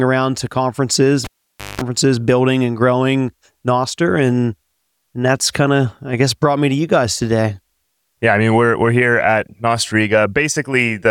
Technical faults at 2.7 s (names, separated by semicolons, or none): none